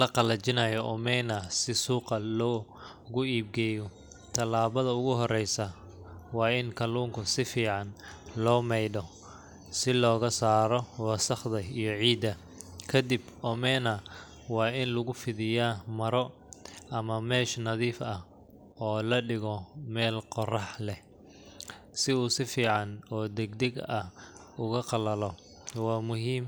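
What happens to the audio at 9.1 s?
Nothing goes wrong at 9.1 s: the speech carries on intact through that moment, with no dropout, click or other fault.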